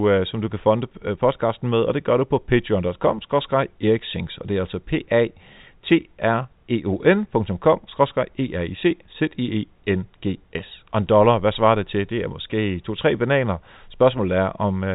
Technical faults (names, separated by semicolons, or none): none